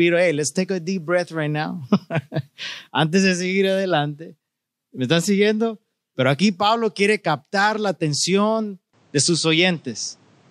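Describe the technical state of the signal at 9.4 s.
The input likely switched to a poorer device at 8.93 s, and 9.4 s falls inside that span, which runs to 10.50 s. The new path cuts everything above 9 kHz, dulling the speech's top end, and adds a faint new noise floor, with no gap and little level change.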